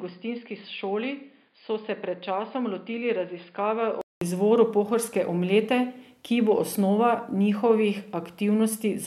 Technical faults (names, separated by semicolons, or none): input switched to a poorer device